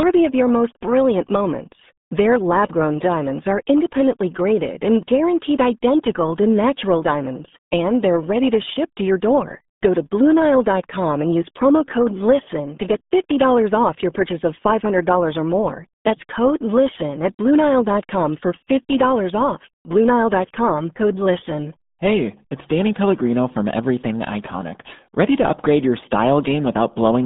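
From start to finish the speech carries the RealAudio 14.4 codec sound. Everything is squeezed into a band from about 150 Hz to 3.6 kHz, with nothing above 3.8 kHz, so consonants lose their edge and the voice turns muffled and gargly. The heavy smearing fits an 8 kbit/s dial-up stream. A spectrogram shows a hard, flat ceiling near 3.8 kHz with empty space above it, and a bare strip below 150 Hz.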